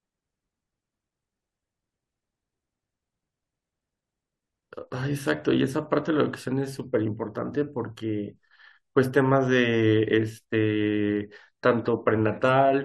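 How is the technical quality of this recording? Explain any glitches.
No technical faults or glitches can be heard here.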